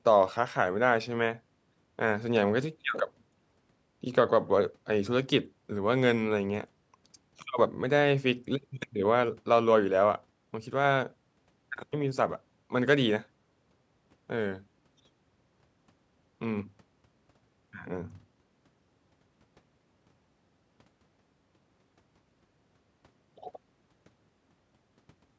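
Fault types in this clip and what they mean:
Nothing stood out on listening to this speech; the trimmed lowest bass and the top end stopping at 8 kHz are just the usual call microphone processing.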